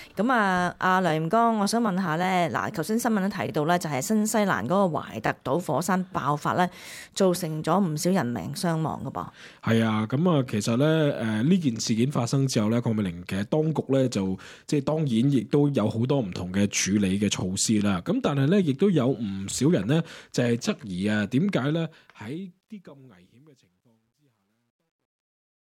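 From 21.56 s the fade-out shows truncation distortion on a fade. The gain stage keeps too few bits with no dither, which fits about 11-bit resolution, so the tail turns grainy, worst from 23.03 s to the end.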